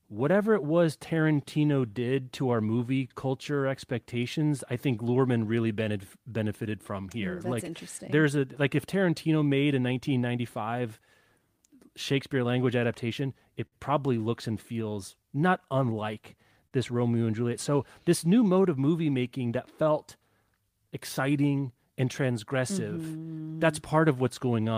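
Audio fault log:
Throughout: clock drift between sender and receiver. The far end's clock runs slow, by roughly 4 percent, so audio arrives a touch slower than it's played out and the receiver's buffer keeps draining. It never settles into a steady rhythm, and you get a faint, recurring unevenness in timing across the whole speech clip. That's the drift showing up rather than any one big glitch.
0.32 to 24.61 s: repeated timing corrections. To keep up with the slow sender, the receiver keeps repeating tiny slices of audio, all stretching in the same direction, adding up to something like 0.7 s over the run. The net effect is playback at about 97 percent speed. The edits are small and irregularly spaced, so they register as a slightly wobbly, dragging tempo rather than obvious repeats.
13.66 to 13.74 s and 16.67 to 16.73 s: short stall from a late packet. Both times a packet wasn't there on schedule, the buffer ran dry, and the last bit of sound got held, 58 ms in the first case and 43 ms in the second, until the data showed up. 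Nothing is lost; playback resumes right where it left off. What you hear is a brief sustained smear with a slight buzzy or dipped quality.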